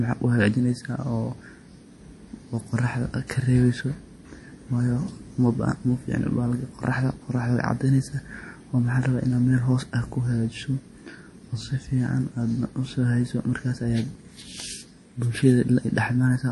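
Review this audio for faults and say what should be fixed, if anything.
Throughout the recording, a low-bitrate encoder likely ran short of bits, as in MP3 compression. To save space it discarded everything above 11.5 kHz and zeroed its weakest frequency lines. Across the whole clip, the top of the speech therefore stops abruptly, and thin bands flicker in and out from frame to frame. The result is a plainly audible watery, swirling texture, which fits an MP3 at around 48 kbps. Encode at a higher bitrate, or keep a lossless master, so the encoder never has to strip treble or starve weak bands.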